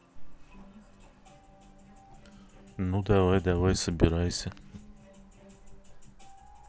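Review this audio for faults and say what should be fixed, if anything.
No faults found; nothing needs fixing.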